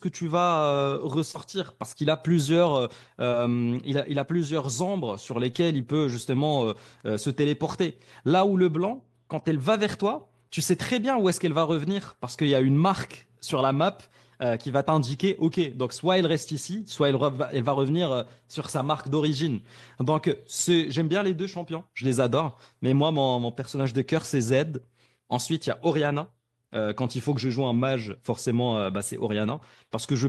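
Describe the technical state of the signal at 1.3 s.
A brief smear or wobble runs from about 1.31 to 1.36 s. This is short concealed packet loss: roughly 20 ms of audio arrived too late to decode, so the receiver extended the preceding sound over the hole for about 21 ms and then blended back into the real signal.

Overlapping the end of that span, from 1.34 to 1.36 s, the sound turns rougher and noisier. That is a lost packet rebuilt from error correction. The 20 ms of rebuilt audio fits a single lost packet, recovered from the low-bitrate copy that Opus in-band forward error correction carries in the following packet. That copy lacks the highest frequencies, so the decoder only estimates them.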